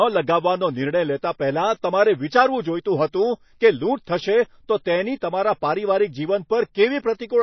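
A speech recording with plainly audible codec damage throughout: nothing reaches above 6 kHz, and the remaining sound has a watery, swirling texture with chirpy sibilants and blurred onsets. This is likely MP3 compression at a low rate, which fits a bitrate around 24 kbps, where the encoder removes the treble and drops weak frequency lines that flicker between frames. At 1.82 s there is a pre-echo: a brief hiss, about 19 ms long, arrives just ahead of a sharp attack and softens it. It happens because the codec spreads the quantisation noise meant for the loud attack across its whole block, filling the quiet gap before the onset.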